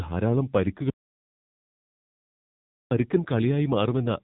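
From the first moment to the end, the speech carries AMR narrowband mobile codec damage. Nothing above 3.8 kHz survives. The coarse pulse-driven vocal model sounds buzzy and synthetic. The heavy damage suggests a low AMR-NB mode, around 6.7 kbps.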